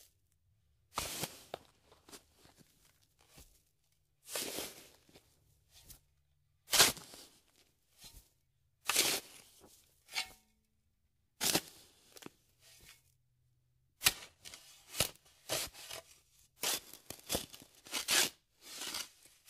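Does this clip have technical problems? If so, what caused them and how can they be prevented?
Yes. Compressed frames skipped at 2.12–2.16, 3.37–3.41, 11.40–11.43 and 17.77–17.81 s. The sound jumps ahead by about 100, 150, 150 and 300 ms, in steps that fit frames of about 46 ms, because the decoder lost or rejected them. Unlike a dropout, no silence is inserted; time simply leaps forward. Prevent it by protecting the file against corruption and checking it decodes fully before use.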